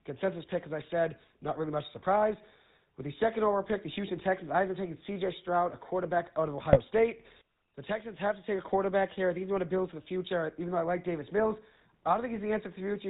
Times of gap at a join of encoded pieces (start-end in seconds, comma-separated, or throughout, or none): none